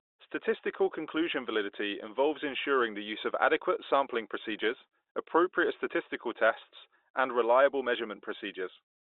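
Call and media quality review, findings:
No faults found: the speech carries the narrow 300 Hz to 3.7 kHz band of a G.711 telephone path, which is operating as expected for a fixed-line connection.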